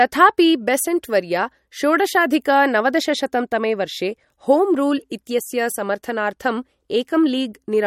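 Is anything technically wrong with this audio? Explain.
Yes. Throughout the speech, likely MP3 compression at a bitrate near 48 kbps starves the encoder, dropping weak frequency components and removing everything above 17.2 kHz, leaving plainly audible watery smearing.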